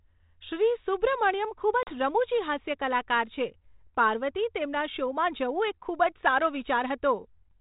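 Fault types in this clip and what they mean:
Packet loss on an ADPCM call: at 1.83 s a run of a few packets drops out of this 32 kbit/s G.726 speech, leaving a hard-edged 40 ms silence. Because ADPCM codes only differences from an adaptive prediction, the decoder's predictor and step size are left out of step with the sender's after the gap, so the speech resumes slightly distorted before recovering by about 1.98 s.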